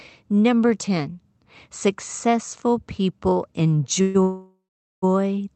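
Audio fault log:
4.01 to 4.16 s and 4.22 to 5.04 s, call audio freeze: just after "successful people" the audio stalls twice, first for about 0.13 s, then for about 0.8 s. Each gap is filled with a held-over buzz of the last sound that fades, and the longer one dies to silence for roughly 0.4 s. The likely cause is packets held up in transit so the jitter buffer ran dry. Nothing is lost; the audio resumes where it stopped, just later, over a call codec band-limited to about 8 kHz.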